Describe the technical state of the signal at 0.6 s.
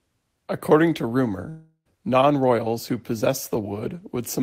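At 0.6 s the speech signal is intact, with no dropout, clipping, glitch or other technical fault at that moment.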